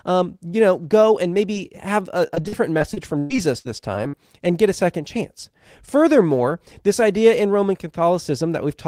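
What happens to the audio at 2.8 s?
Packets were lost or late again and again from 2.27 to 4.15 s, just after "and maybe have a". That is repeated packet loss (robotic sound): ten gaps, the longest 118 ms, each patched by extending the last sound, so about 21% of the stretch is filler and the audio turns choppy and robotic.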